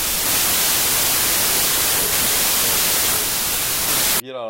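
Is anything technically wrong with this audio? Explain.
Yes. A wrong sample width runs from 0.0 to 4.2 s. The stream is being parsed with a different byte count per sample than it was written with, which fits 32-bit samples read as packed 24-bit. Many values straddle sample boundaries, so loud noise buries the speech, which plays at 0.75 times speed and lowered in pitch.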